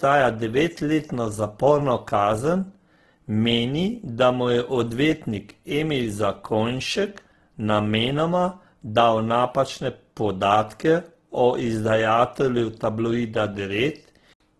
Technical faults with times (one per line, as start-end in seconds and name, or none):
0.00-14.59 Opus compression